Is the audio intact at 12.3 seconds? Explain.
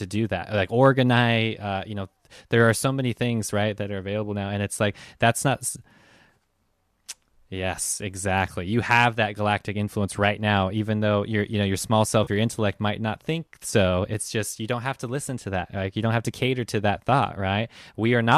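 No. From 12.24 to 12.29 s, AAC frame loss with concealment replaces about 30 ms with a smeared, noisy patch rebuilt from the last good spectrum, not the hard silence of a plain dropout.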